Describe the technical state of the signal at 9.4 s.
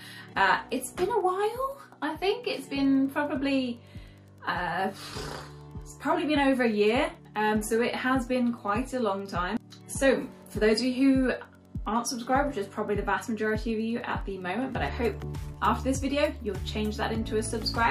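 A faint, steady ticking about ten times a second sits well below the sound at 9.4 s and runs through the whole clip. This is Wi-Fi interference: a nearby radio's beacon, repeating every 102.4 ms, is rectified by the audio circuit and heard as a click.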